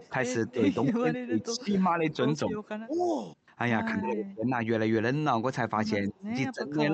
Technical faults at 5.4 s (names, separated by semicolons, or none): none